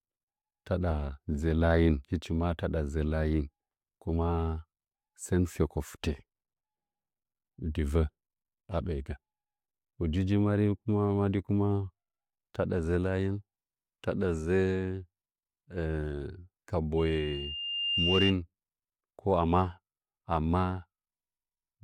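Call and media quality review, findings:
Loudspeaker feedback squeal, 16.97 to 18.35 s. Single 2.8 kHz tone rising over about a second to roughly 5 dB above the speech. Component: open mic near its monitor speaker. Mechanism: loop gain above unity at 2.8 kHz, so the tone regenerates until the loop breaks. Check mic-to-speaker coupling and echo control.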